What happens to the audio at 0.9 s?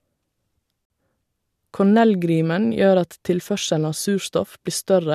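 At about 0.9 s the audio hits a gap between stream segments. The timestamps of two consecutive segments don't quite meet, leaving a hole of roughly 48 ms, from 0.85 s to 0.90 s, which the player fills with silence. The speech stops abruptly on a hard edge and resumes just as sharply, a brief dropout. Nothing is removed; the following speech arrives about 48 ms late.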